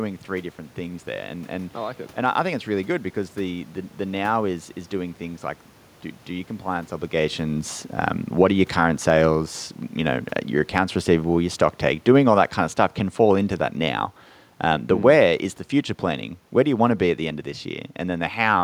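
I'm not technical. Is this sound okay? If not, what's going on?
No. Just after "your compliance obligations um", from about 8.3 to 14.1 seconds, there is automatic gain falling. The recorder judged the input too loud, or the background noise too strong, and gradually turned itself down, so the speech and the room noise behind it sink together.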